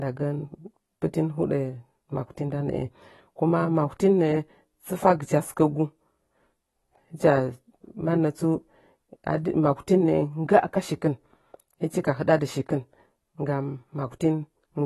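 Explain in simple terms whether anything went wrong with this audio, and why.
Yes, the whole recording sounds dull and a bit swirly, with nothing above 12 kHz, which is most likely heavy AAC compression squeezing the speech too hard.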